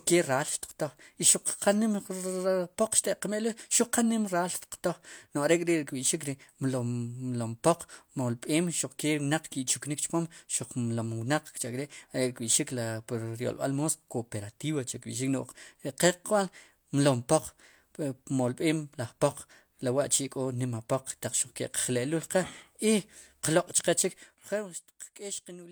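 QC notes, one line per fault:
No faults found.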